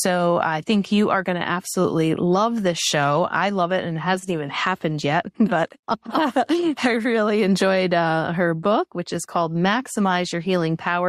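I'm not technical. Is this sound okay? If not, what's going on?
Yes, there are no audible technical faults in this recording.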